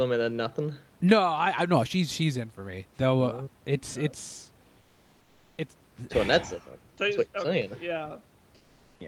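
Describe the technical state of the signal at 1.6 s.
At 1.6 s the speech signal is intact, with only the room's own background noise sitting about 35 dB below the speech.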